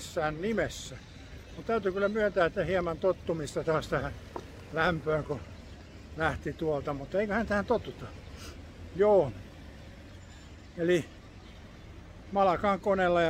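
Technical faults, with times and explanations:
No technical faults can be heard; the signal holds steady and continuous for its whole duration.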